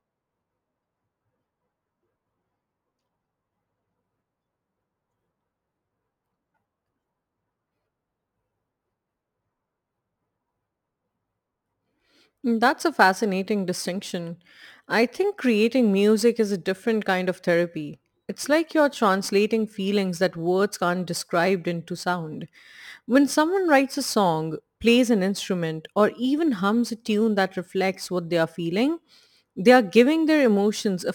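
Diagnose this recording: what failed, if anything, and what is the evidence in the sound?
A crude rate conversion at the sample-format conversion stage repeats samples without filtering, which fits a 44.1 kHz to 48 kHz change. Throughout the speech, a gritty, inharmonic fizz roughly 30 dB below the signal tracks the louder and brighter sounds.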